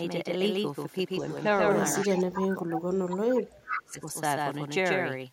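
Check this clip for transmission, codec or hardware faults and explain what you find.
Three faults are audible in this speech clip.

A doubled audio track runs through the whole clip: a second, full-band copy trails the original by about 150 ms, roughly 5 dB quieter. It is most likely the same audio captured again by a slower path and mixed back in. Unlike echo, this copy is steady and complete, with no thinning, chopping or room colour, and it sits at a fixed short offset for the entire length.

Echo leak appears at 1.2 to 1.58 s, 1.98 to 2.46 s and 3.7 to 3.91 s, each time as a copy of the voice arriving 355 ms late. It is faint in the first burst, much stronger in the second, and nearly as loud as the speech in the third. It is likely a loudspeaker-to-microphone return that the far end's echo canceller failed to remove. It differs from the doubled track in its longer delay and in coming only in scraps at varying strength.

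Speech suppressed in double talk runs from 2.04 to 4.08 s, about two seconds, overlapping the second and third echo bursts. The voice dips, falling by up to roughly 30 dB at its deepest. This is likely the echo canceller clamping down while both sides were active, because it could not separate the talker from the loudspeaker echo. Here the original voice loses level, whereas echo leak adds unwanted sound.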